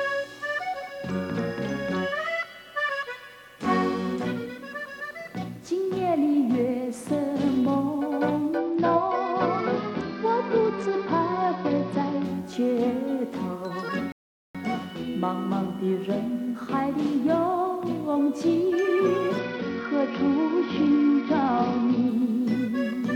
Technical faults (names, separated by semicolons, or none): Bluetooth SBC bit pool drop; playback stall